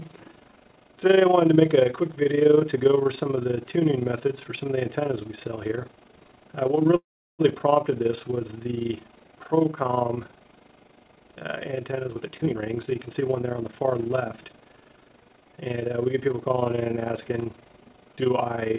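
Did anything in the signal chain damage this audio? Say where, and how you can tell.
Yes. Overlap-add ripple at the framing/resynthesis stage runs throughout: the level swings about 11 dB around 30 times a second, a rough tremolo from windows that don't sum flat.

A call audio freeze at 6.96–7.41 s fills the gap with a fading tail, then about 0.36 s of silence. The likely cause is held-up packets draining the jitter buffer.

A jitter buffer speed-up from 12.09 to 14.04 s runs the sound at 122% at unchanged pitch. Roughly 0.4 s of pitch-period slices were dropped to cut the built-up delay. The call path's band-limit near 4 kHz fits G.711.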